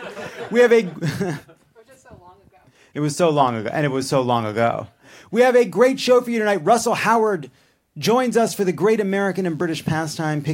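From about 9.09 s to the end at 10.53 s, a thin, steady buzz sits well under the sound, roughly 40 dB down. That's DECT cordless phone buzz: a nearby handset or base pulsing every 10 ms, rectified by the audio circuitry into a 100 Hz tone rich in harmonics.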